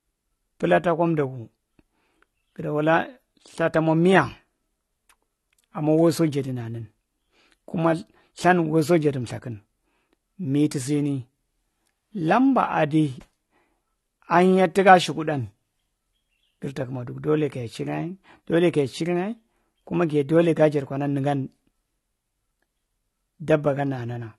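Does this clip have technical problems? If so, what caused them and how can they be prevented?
Yes. Low-bitrate audio saved at a high bitrate, throughout: nothing above 12 kHz survives, likely left by an earlier low-bitrate encode that the later MP3 cannot restore. Prevent it by encoding once from the original, uncompressed source instead of re-encoding compressed files.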